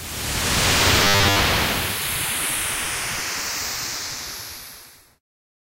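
From 1.04 to 1.39 s, the audio takes on a robotic sound from repeated short buffers. It turns hard and metallic, with a fixed buzz near 100 Hz laid over it. The rough shape of the sound still comes through. The likely cause is new audio arriving too slowly, so the playback repeats its last short block instead of waiting. A 100 Hz buzz fits a 10 ms block. Most of that stretch, around seven tenths, seems to be repeated material.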